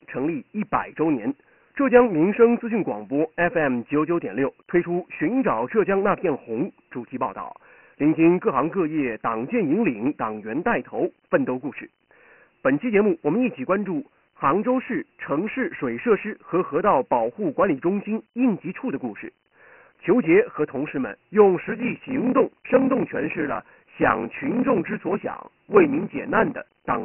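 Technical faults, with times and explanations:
Throughout: Dialogic VOX ADPCM. The speech sounds muffled and gritty, with a rough hiss following every syllable and nothing at all above 3 kHz, so sibilants and consonant edges are dull and smeared. Energy is confined to a narrow telephone-style band starting near 150 Hz. The encoder stores each sample as a 4-bit step from an adaptive prediction. At 24 kbps, which fits 6,000 samples a second, the top of the band stops at 3 kHz, and the coarse steps leave heavy quantisation grit riding on the signal.
21.62 to 27.04 s: block size mismatch (padded). From here to the end, a steady 38.3 Hz buzz sits under the speech, and delivery slows to about 0.889 times normal speed while the pitch stays at roughly its usual level. One stage hands over shorter blocks than the next stage reads, which fits 1,024-sample blocks, and the shortfall in each block is filled with silence. 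Those regular gaps produce the buzz at the block rate and stretch the timing without shifting pitch.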